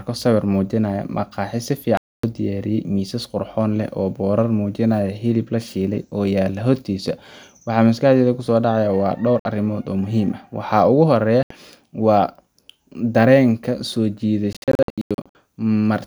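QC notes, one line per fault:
1.97–11.51 s: Bluetooth dropout, three gaps at 1.97–2.24 s (261 ms), 9.40–9.45 s (56 ms) and 11.43–11.51 s (75 ms). Audio packets likely reached the headphones too late and were discarded, so the output drops abruptly to silence and then resumes further along, as though it had kept playing.
14.53–15.35 s: Bluetooth dropout, scattered across about 820 ms, with about 523 ms lost in total and the longest gap 93 ms. A sustained run of late packets, likely dropped one after another, makes the sound stutter in and out and skip ahead at each gap.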